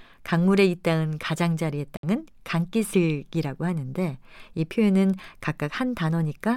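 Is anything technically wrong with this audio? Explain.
Yes. A Bluetooth dropout occurs from 1.97 to 2.03 s. The speech cuts to silence for 61 ms, then picks up further along, as though it had kept playing. The likely cause is late audio packets being discarded, which fits about three lost packets.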